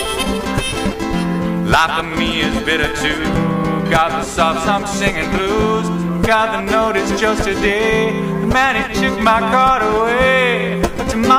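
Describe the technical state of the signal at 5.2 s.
At 5.2 s the signal is intact, with no audible dropout, clipping, distortion or other fault at that moment.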